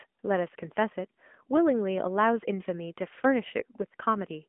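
From start to finish the speech carries AMR narrowband mobile codec damage. Nothing reaches above about 3.6 kHz, and the low end thins out below roughly 200 Hz, giving the boxed-in telephone band. The codec rebuilds the voice from a vocal-tract model fed by sparse pulses in short frames. Here that modelling is plainly audible as a buzzy, synthetic edge on voiced sounds, which fits an upper mode near 10.2 kbps.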